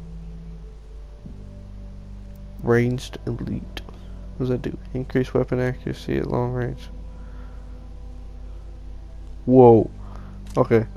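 A steady low drone at 50 Hz runs under the sound from start to finish, sitting only roughly 15 dB below the signal and clearly audible. This is mains hum: power-line current, coupled in through a ground loop or nearby transformer, leaking into the signal path.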